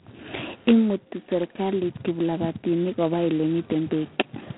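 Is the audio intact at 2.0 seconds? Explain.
No. At 2.0 seconds the speech carries G.726 ADPCM damage, present throughout the clip. Coding only a few bits per sample of prediction error leaves a harsh, rasping hiss that follows the speech level, which fits the 16 kbit/s mode. The line band spans 150 Hz to 3.5 kHz, with nothing above 3.9 kHz.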